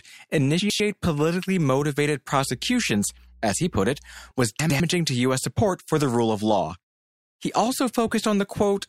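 Right at 0.6 to 0.8 s, just before "politically motivated", there are chunks out of order: two 100 ms pieces swap places, so one arrives a chunk late. You get a brief jumbled stutter. The same thing happens again at 4.6 to 4.8 s. In between, from 2.30 to 4.31 s, just after "politically motivated", mains hum comes in. It's a steady 60 Hz drone with some low harmonics, the sort of thing a ground loop or nearby transformer leaks in, and it sits quite faint, roughly 30 dB under the speech.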